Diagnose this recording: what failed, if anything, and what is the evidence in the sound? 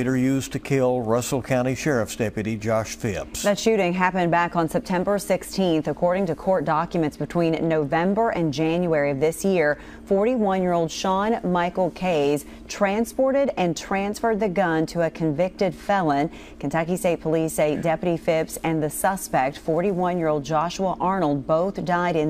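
Sample-rate conversion failed: 22 kHz material was raised to 48 kHz by linear interpolation, causing imaging from linear upsampling throughout. This weak filter dulls the top end and leaves a mirrored spectrum copy between 11 and 22 kHz, roughly 30 dB down, heard as metallic shimmer on bright sounds.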